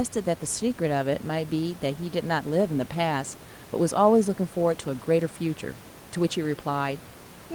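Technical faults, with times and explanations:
Nothing stood out on listening to this speech clip, with only the room's own background noise sitting about 22 dB below the speech.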